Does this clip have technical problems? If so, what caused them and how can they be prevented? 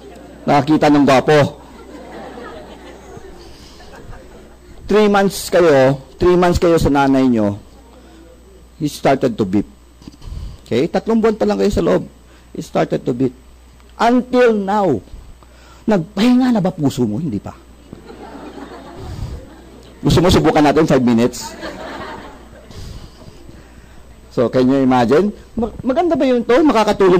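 Yes: hard clipping runs throughout, with the signal driven about 4 dB past full scale so roughly one sample in twenty is sliced flat, giving crackle on peaks. The waveform shows squared-off tops; a spectrogram shows harmonic smearing upward. Lowering input gain before conversion prevents it.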